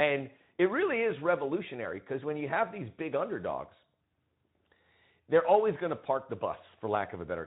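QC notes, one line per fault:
Nothing stood out on listening to this speech clip.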